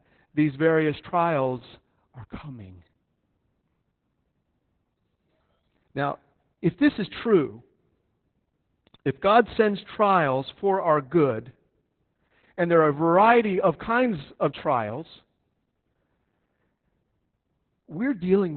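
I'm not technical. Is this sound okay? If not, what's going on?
No, not quite. The whole clip has been through heavy Opus voice compression. This squeezes speech into a very small amount of data. To do that, it throws away everything above about 4.3 kHz. That is the narrow, telephone-like range, so the voice sounds muffled and boxy from start to finish. The coder also rebuilds the voice roughly, which makes it sound hoarse and slightly robotic.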